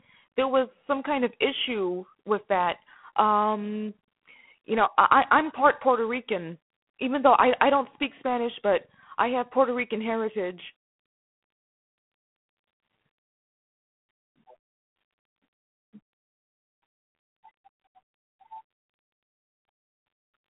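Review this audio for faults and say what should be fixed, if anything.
The whole recording runs through G.726 ADPCM, and it's plainly audible from start to finish. The speech sits in a telephone band, roughly 150 Hz to 3.4 kHz, with nothing at all above 3.8 kHz. On top of that there's a rough, rasping hiss that rises and falls with the speech level. That grit is what you get when each sample only carries about three bits of difference from the codec's running prediction, which fits the 24 kbit/s mode. To avoid it, capture the audio directly or over a wideband link, rather than through a narrowband ADPCM phone path.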